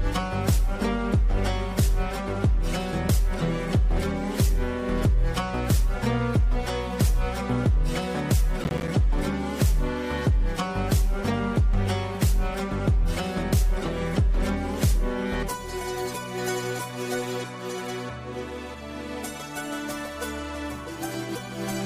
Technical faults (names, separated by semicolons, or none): processor overload crackle